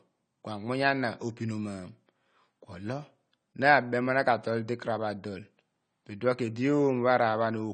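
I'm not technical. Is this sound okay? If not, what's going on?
No. Throughout, the speech sounds dull, with a fizzy, smeared edge and nothing above 9 kHz; the likely cause is heavy AAC compression.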